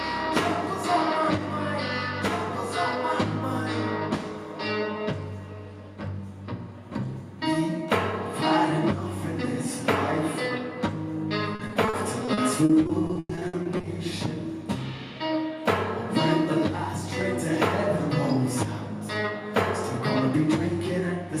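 From 11.55 to 13.85 s there is repeated packet loss, giving a robotic sound. Short holes keep appearing, the longest about 100 ms. Each is patched by stretching the last sound. About a quarter of the stretch is filled this way. It sounds choppy.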